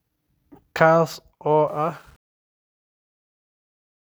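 A speech recording whose fade-out, starting at roughly 1.7 s, passes through a gain stage that keeps too few bits and adds no dither, which fits a path only about 9 bits deep. That is truncation distortion on a fade: from 1.68 s to the end at 4.18 s, the falling waveform collapses into coarse square steps. It is worst from 2.04 s onward, where the tail turns gritty.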